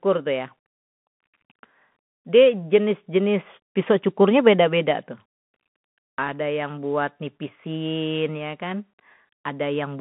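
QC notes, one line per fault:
throughout, Bluetooth CVSD headset codec: speech confined to a 150 Hz to 3.4 kHz band, nothing above 3.8 kHz; one-bit step tracking adds granular hiss and scratchy s sounds.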